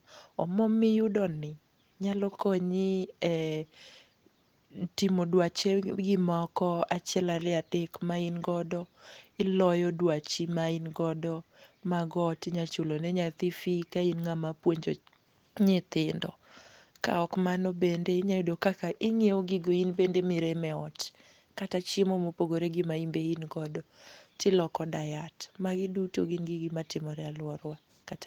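No technical faults are present.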